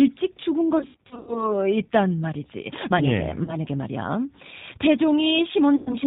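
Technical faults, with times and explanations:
throughout, G.729 codec: the speech is rebuilt from a vocal tract filter, a pitch predictor and a few pulses per frame, at a rate that fits 8 kbit/s. Nothing above 4 kHz survives, so the sound is plainly dull, rough and synthetic.
0.79–1.49 s, 3.44–3.57 s, 5.76–5.96 s, VoIP packet loss concealed by the speech codec: in the first stretch, 280 ms of audio is lost in gaps scattered over 480 ms, the longest lasting 80 ms. The second loses 40 ms and the third 100 ms. The decoder repeats its last pitch and filter with falling gain, so the gaps become a fading buzzy tone or coloured noise. Because each frame builds on the last, the speech stays weak or distorted for a moment after each gap.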